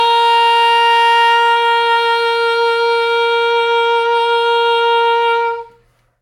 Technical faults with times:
none

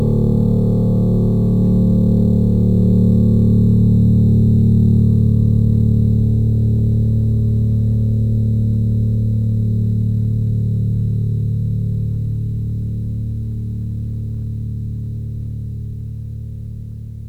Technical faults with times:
0.00-17.29 crude rate conversion

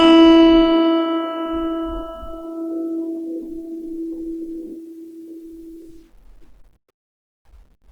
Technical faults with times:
0.00-7.92 Opus compression

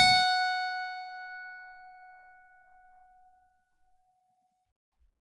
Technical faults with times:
0.00-5.22 Dolby Digital compression

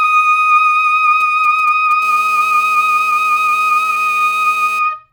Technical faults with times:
1.20-1.93 GSM signalling bursts
2.02-4.79 GSM phone buzz

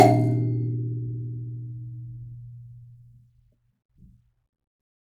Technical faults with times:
none

